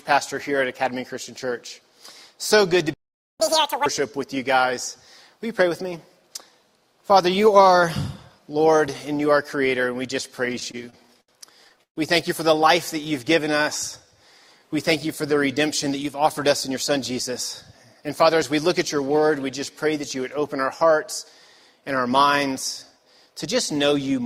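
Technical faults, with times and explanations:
2.94 to 3.40 s, playback stall: the output goes silent for about 0.46 s in mid-flow, most likely because the player ran out of data or its output thread was held up. Nothing is lost from the audio; the sound simply halts for nearly half a second and then resumes from the point where it stopped, which leaves the player running that much behind its schedule.
3.40 to 3.86 s, catch-up at higher speed: straight after the stall the player resamples its backlog to win back the delay, running at 2.0 times normal speed for about 0.46 s. Because resampling changes the rate and pitch together, the sound jumps up by roughly ten semitones and rushes along, then drops back to normal speed and pitch once the lost time has been recovered.
10.45 to 11.98 s, repeated stalls (stutter): packets kept arriving late, so the jitter buffer ran dry fifteen times in this stretch. 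At each gap the receiver extended the last sound until new data came in, with the longest wait about 131 ms, and the fill adds up to about 347 ms, close to a quarter of the span. No audio is skipped, but the sound drags and judders in short stops.
13.01 to 13.64 s, jitter buffer slow-down: with its reserve running low, the receiver built the buffer back up by repeatedly inserting copies of single pitch periods or short slices of pauses, adding about 53 ms in total. The audio runs at about 93 percent of normal speed while keeping its pitch, so sounds come out slightly stretched and drawn out over these 0.6 s.
16.68 to 17.31 s, 17.95 to 18.96 s and 22.52 to 23.48 s, jitter buffer speed-up: each time the buffer held more audio than its target, and the receiver trimmed the excess by cutting out short pieces one or a few pitch periods long, many times in a row. Roughly 50 ms, 50 ms and 70 ms go missing, so these passages play at about 106, 104 and 106 percent speed with unchanged pitch, the first and last sounding hurried.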